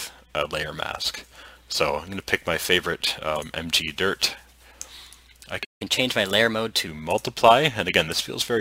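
At 5.64 s the sound cuts out. This is a playback stall. The output goes silent for 158 ms, until 5.82 s. The player likely ran short of data or its thread was blocked. The sound then resumes.

From 5.82 s to 6.87 s comes catch-up at higher speed. The player resamples its backlog to run 1.15 times faster. Speed and pitch rise together, by about two semitones. Over that second it wins back roughly the time the gap cost.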